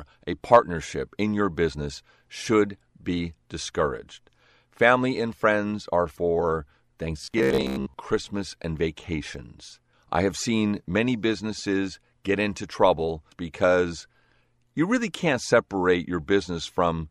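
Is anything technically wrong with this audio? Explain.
Yes. From 7.22 to 7.94 s the speech turns into robotic sound from repeated short buffers: a rigid metallic buzz near 66.7 Hz, likely from a roughly 15 ms chunk looping while most of the real audio is skipped.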